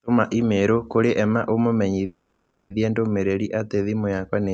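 A speech recording carried over a call path that caps the audio near 8 kHz shows a call audio freeze from 2.05 to 2.72 s, likely from delayed packets draining the jitter buffer. The last sound trails off, fading into about 0.25 s of silence, then resumes intact at "ndũmĩrĩri atĩ thimũ", roughly 0.65 s late.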